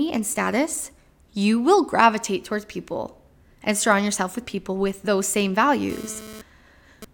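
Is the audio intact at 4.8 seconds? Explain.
Yes, the speech at 4.8 seconds is intact, with no fault present at that moment.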